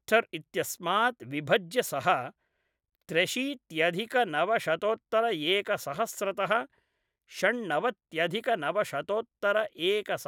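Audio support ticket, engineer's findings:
Listened to the full speech recording; nothing stood out, no issue found to log.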